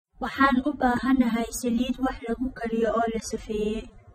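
AAC compression runs from start to finish: the speech is dull and smeared, with nothing above 14.8 kHz. The sound likely passed through AAC-LC, which splits each frame into frequency lines and quantises them coarsely against a hearing model. Here that coding damage is plainly audible, which fits a low bitrate of around 24 kbps. The encoder spends too few bits on detail, so it cuts the top band away.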